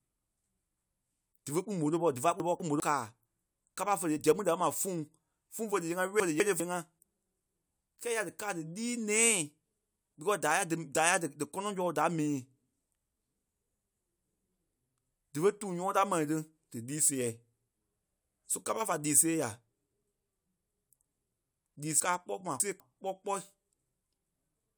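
At 2.4–2.8 s and 6.2–6.6 s, chunks out of order swap two 200 ms blocks, and at 22.0–22.8 s one block lands three chunks late. The speech jumbles briefly. Waveform and spectrogram show abrupt vertical seams where formant tracks jump discontinuously.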